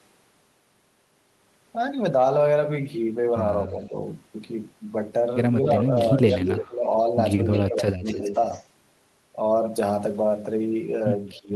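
At 3.68 to 3.95 s the speech dips slightly, likely speech suppressed in double talk: the canceller hears both sides at once and turns everything down. From 5.67 to 6.66 s there's an echo leak, a copy arriving about 260 ms late and fairly loud, likely loudspeaker pickup the canceller didn't fully remove. Then 6.67 to 6.87 s drops sharply, likely the same double-talk suppression. A faint echo leak at 7.52 to 7.64 s (likely) comes just before a deep cut from 7.66 to 8.33 s, likely suppression again. Another faint, likely echo leak follows at 8.04 to 8.66 s. A final likely suppression dip comes at 11.35 to 11.51 s.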